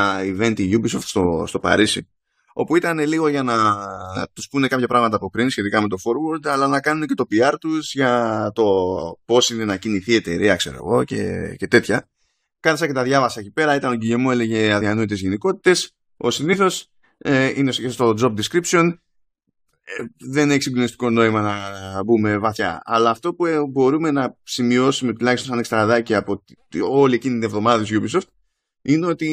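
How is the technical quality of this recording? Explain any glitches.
The speech drops small pieces of itself four times through compressed frames being skipped: at 10.79 s, just after "κινηθεί η εταιρεία ξέρω"; at 14.80 s, just before "γενικότητες ο"; at 16.52–16.54 s; and at 22.56–22.60 s, after "συγκλονιστικό νόημα να μπούμε". Whole coded frames never reached playback, so the audio leaps forward by roughly 50 ms (about 20 ms at 16.52 s). Each join is heard as a brief blip or click where the speech jumps ahead.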